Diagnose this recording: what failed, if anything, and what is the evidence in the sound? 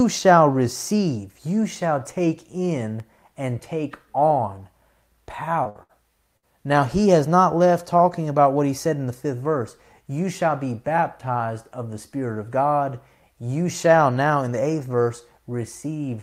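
The network path failed, showing up first as short concealed packet loss at 5.63 to 5.67 s. About 20 ms of speech never arrived, and the receiver bridged the hole by extending the preceding sound for roughly 15 ms before blending back. The result is a brief smear or wobble.

Right after that come three bursts of packet loss, at 5.69 to 5.77 s, 5.83 to 5.91 s and 6.37 to 6.45 s. Each drops about 60 ms of audio. The concealment carries the last sound forward while fading it, giving a held buzz or fading hiss, then resumes with that stretch missing.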